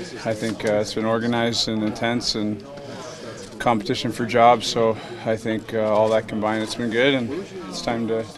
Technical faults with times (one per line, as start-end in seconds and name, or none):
none